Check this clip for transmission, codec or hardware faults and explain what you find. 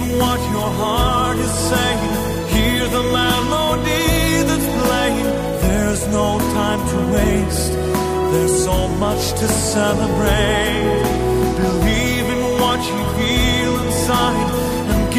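No transmission, codec or hardware faults turn up anywhere in this clip.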